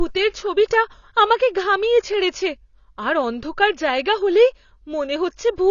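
Throughout, the speech sounds dull and smeared with a fizzy warble and nothing above 7 kHz, likely AAC compression squeezed to a low bitrate near 24 kbps.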